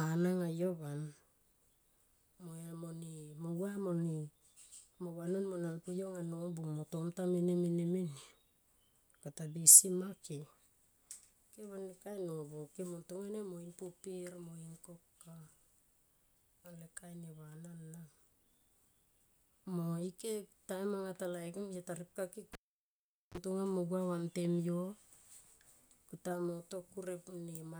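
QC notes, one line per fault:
22.53–23.38 s cable pulled and plugged in: pop after "taripka ke", 0.79 s near silence, 34 ms of 50 Hz mains buzz as the plug tip touches, pop before "mo gua vantem yo".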